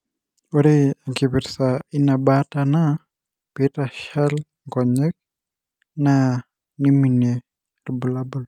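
The speech recording shows no technical faults: the signal stays intact and continuous throughout, with nothing going wrong at any point.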